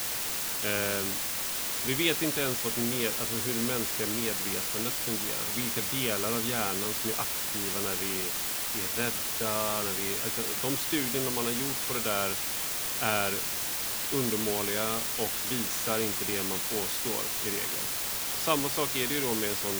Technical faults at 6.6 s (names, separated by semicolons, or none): low bit depth with dither